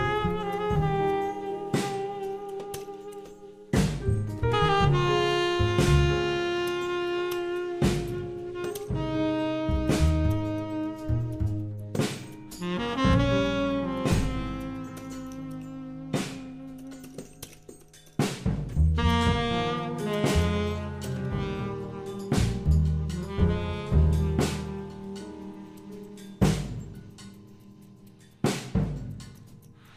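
No technical faults are audible anywhere in the recording.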